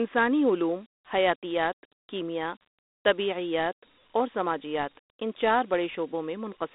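From start to end, the speech carries Dialogic VOX ADPCM damage. The coder stores each sample as a coarse 4-bit step, so a gritty hiss trails the speech. The band runs from 250 Hz to 3.7 kHz, with nothing above 3.8 kHz. This fits an 8,000-sample telephone file.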